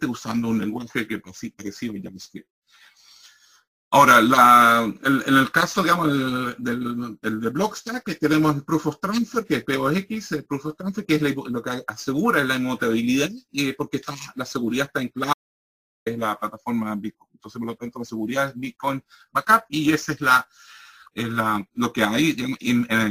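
From 15.33 to 16.06 s the audio drops out to silence for about 0.73 s, which is complete silence with no room tone at all. Most likely the input was lost while recording carried on. That total blankness, rather than a muffled or quieter stretch, separates it from a level dip or gating.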